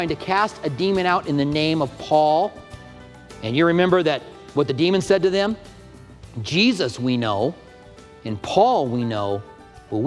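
No technical faults are audible anywhere in the clip.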